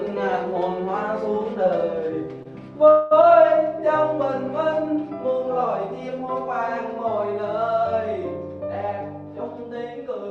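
At 2.43 s, one packet arrived late and the jitter buffer ran dry. The receiver held the last bit of sound for about 24 ms until the packet came in, then picked up from the same point. This is a short stall from a late packet: nothing is lost, but the sound hangs briefly at 2.43 to 2.47 s with a faint buzzy smear before moving on.

At 2.90 s, a longer hold-up emptied the jitter buffer again, most likely because packets were delayed in transit, and the result is a call audio freeze. The receiver kept extending the last sound for about 205 ms, until 3.13 s. It never fell to silence; instead it becomes a drawn-out, fading buzz. When the packets resumed, the audio carried on where it had stopped, so the rest of the clip sits about a fifth of a second later, with nothing missing. Through both events, the call codec's coding noise and a top end that stops near 12 kHz are present, which fits Opus at around 40 kbps.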